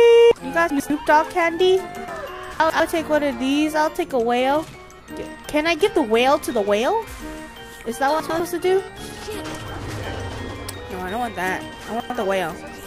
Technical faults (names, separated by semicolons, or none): chunks out of order